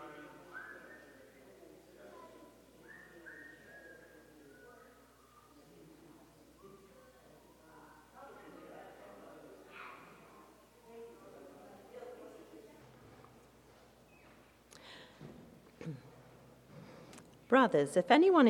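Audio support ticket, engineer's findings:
Mains hum, whole clip: power line coupling in via probable ground loop or nearby transformer. Steady 60 Hz tone with low harmonics, roughly 30 dB below signal.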